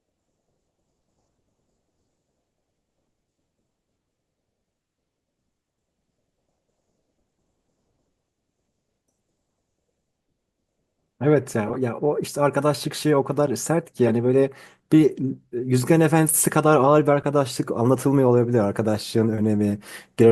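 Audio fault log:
11.67–11.76 s, 14.05–14.11 s and 17.45–17.50 s, corrupt frame decoded: a few compressed frames with flipped bits were decoded anyway. Misread gains and codes put energy at wrong frequencies, causing short squeaky bursts, the first two loud, around -10 dBFS, the last fainter.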